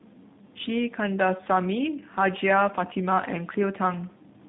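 Throughout, tandem speech coding is heard. The speech passed through CVSD, then G.711, then G.729A, each coding earlier damage. It sounds rough, warbly and muffled, with nothing above 3.8 kHz.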